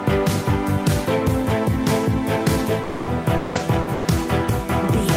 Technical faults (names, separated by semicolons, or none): long network dropout; lost packet rebuilt from error correction; burst of packet loss